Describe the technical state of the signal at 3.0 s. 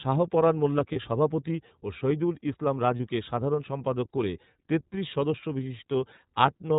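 A lost iLBC frame falls between 2.96 and 3.00 s, after "সভাপতি ও শহিদুল ইসলাম". The decoder repeats the last pitch cycle with noise, giving a brief buzzy held vowel rather than silence or a click, and it recovers cleanly by "সাধারণ সম্পাদক করে তেত্রিশ". Underneath, the iLBC codec's narrowband coding cuts everything above 4 kHz and adds a plainly audible rough, synthetic edge. Its frame timing fits 30 ms frames.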